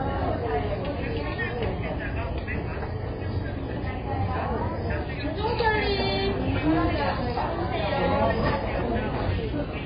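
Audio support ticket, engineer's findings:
Throughout: dull, band-limited audio with nothing above 5 kHz; likely AAC compression (AAC-LC) at a very low bitrate, around 16 kbps. Heavy smearing distinguishes it from a simple low-pass filter.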